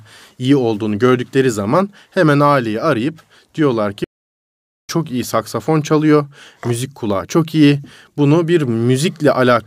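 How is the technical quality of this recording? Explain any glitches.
The recording has one clear glitch: a playback stall from 4.04 to 4.89 s. The player likely ran short of data, or its thread was blocked, so the output went dead for about 0.85 s. The speech halts abruptly in mid-flow, leaving a silent gap, and then picks up again with "çok iyi saksafon çalıyor".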